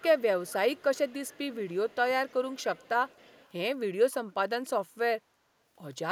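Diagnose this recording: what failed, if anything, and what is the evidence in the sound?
Call processing failed: a loudspeaker end's echo canceller likely let part of its microphone pickup return. Echo leak trails the speech by 274 ms at 0–0.22, 0.45–0.54, 0.73–2.34, 2.5–2.89 and 3.07–3.52 s, roughly 20 dB down at first, fading toward 30 dB.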